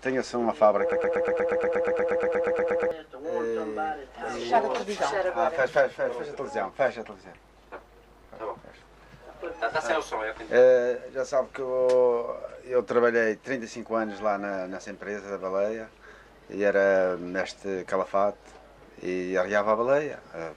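A stall in the player, encoder or stream most likely left it resending the last fragment it held, producing a broken-record loop from 0.92 s to 2.91 s. A piece of audio about 0.12 s long repeats exactly, back to back, 17 times, giving a rapid stuttering pulse at roughly eight repeats per second. Whatever should have played across those two seconds is missing, and the sound resumes from later material once the loop ends.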